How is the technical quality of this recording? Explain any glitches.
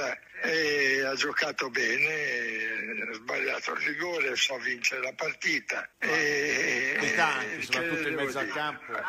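The recording has two brief glitches, both from damaged data in a compressed stream, at 4.46 to 4.52 s and 6.97 to 7.02 s. Each time, corrupted bytes make the decoder misread the frames, lose sync and hunt for the next valid header, leaving a roughly 55 ms blip.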